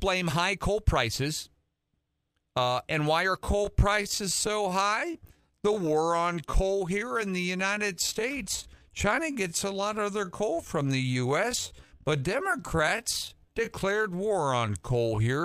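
From 3.35 s to the end of the speech, the pace abruptly drops to 0.68 times its original speed while the pitch stays where it was, the signature of a time-stretched section. The likely cause is software that lengthened the audio by repeating short pieces to preserve pitch. The delivery drags from that point on. On a spectrogram, formant and harmonic bands keep their frequencies but stretch horizontally, and the waveform's syllable envelopes widen.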